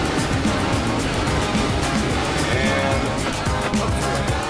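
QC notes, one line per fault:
Nothing to flag here; I listened all the way and didn't hear anything that needs a note.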